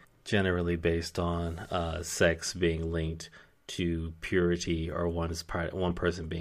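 At 0.72–0.74 s, 2.09–2.12 s, 4.76 s and 5.88–5.92 s, a corrupt frame was decoded: damaged bits misplaced energy across the spectrum, heard as brief chirps or blips. Spectrograms show short vertical smears of stray energy; waveforms show small spikes, strongest near 2.1 s.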